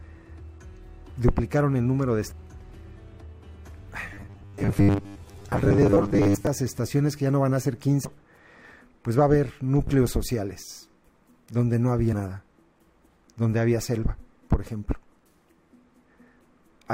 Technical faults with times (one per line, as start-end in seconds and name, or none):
2.30 damaged data in a compressed stream
4.14-6.47 robotic sound from repeated short buffers
8.04 damaged data in a compressed stream
9.87-9.91 loud pop